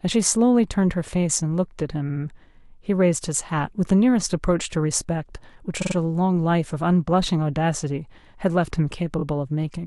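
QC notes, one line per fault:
2.09–2.23 s, 5.81–5.95 s, 9.18–9.23 s: repeated frames. A 70 ms block plays twice more, a 46 ms block three times, a 23 ms block twice, which fits whole 23 ms frames being resent. The repeats add 139, 139 and 46 ms. Unlike a dropout, nothing goes missing: the same slice of speech stutters.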